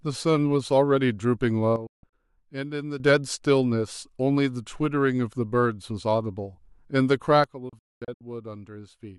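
Speech with a sudden gain jump at 1.76 s, likely a gain setting applied without a ramp: sound and background noise drop together by about 10 dB until 3.0 s, then by about 12 dB from 7.44 s to the end. Digital broadcast dropouts mute the receiver with 3 ms fades. Short holes totalling 192 ms fall between 1.87 and 2.13 s (longest 160 ms), and 352 ms are lost between 7.69 and 8.21 s (longest 224 ms).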